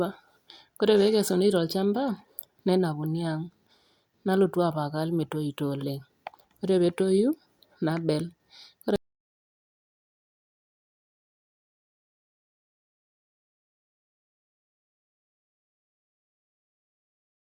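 Speech that cuts off abruptly at 8.96 s and never returns: everything from there to the end is dead silence, with no room tone or hiss. This is an audio dropout to silence, likely from the input being lost while the recorder kept writing silence.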